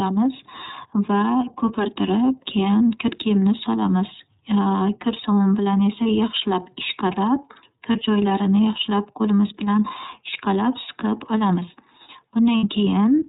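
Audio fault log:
throughout: iLBC codec. Narrowband, slightly rough, synthetic-sounding speech with nothing above 4 kHz, consistent with iLBC's 13.33 kbps, 30 ms frame mode.
6.03–6.06 s, 7.92–7.96 s, 12.57–12.64 s: lost iLBC frames. Brief held buzzy vowel where 30, 30 and 60 ms dropped out and the decoder repeated the last pitch cycle with noise.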